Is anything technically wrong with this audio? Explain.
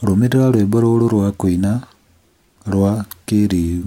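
No, nothing is technically wrong with this audio.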